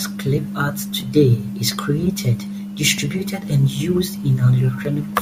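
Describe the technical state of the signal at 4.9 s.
At 4.9 s the signal is intact, with no fault to be heard at that moment.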